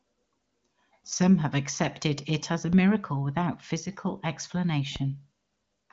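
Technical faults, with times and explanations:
2.73 s and 4.96 s, DC step: each time the waveform's centre line jumps abruptly, then drifts back to zero as a 20 Hz high-pass bleeds the offset away. This gives a low thump, seen as a thin vertical stripe strongest at the bottom of the spectrogram, while the speech above continues unaffected.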